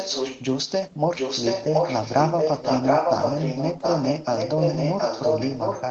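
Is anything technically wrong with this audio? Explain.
Yes. An echo leak runs from 0 to 0.43 s and again from 1.16 s to the end. The likely cause is a far-end loudspeaker whose echo canceller let the microphone's pickup slip through and travel back. A copy of the speech trails 0.72 s behind: first somewhat quieter than the original, then about as loud, all within the call's 8 kHz ceiling.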